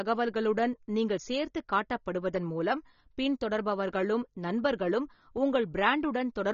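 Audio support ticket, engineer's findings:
AAC compression, throughout the speech. Dull, band-limited sound with nothing above 6.9 kHz; coding damage plainly audible. Likely AAC-LC encoding at a low bitrate, around 24 kbps: encoder drops the top band and quantises remaining spectrum coarsely to fit.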